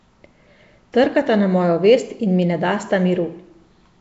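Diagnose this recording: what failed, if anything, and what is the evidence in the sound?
Throughout the speech the codec stage is at fault: the sound carries a rough, hissy halo and a smeared, underwater quality, and nothing is present above about 7.7 kHz. This points to Nellymoser compression, likely Flash's Nellymoser Asao at around 32 kbps. It codes short fixed blocks at a flat two bits per sample and fills the starved weaker bands with noise. Unlike analogue hiss, that noise comes and goes with the speech rather than sitting steadily underneath it.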